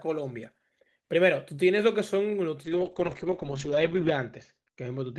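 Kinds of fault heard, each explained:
Call bitrate drop: from 2.65 s the encoder gets far fewer bits, so the speech turns coarse and watery and its top end falls from 20 kHz to 8 kHz, which fits a drop from 32 to 8 kbps. Unlike packet loss, nothing goes missing.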